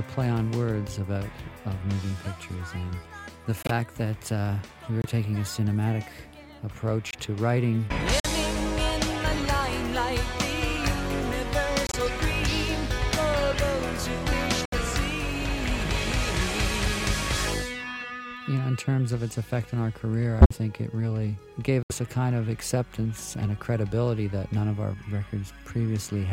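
Corrupt frame muted at 3.62, 5.02, 7.11, 8.20, 11.87, 14.65, 20.40 and 21.83 s: damaged compressed frames were rejected and replaced by abrupt silences of about 0.04 to 0.13 s. Timing never shifts.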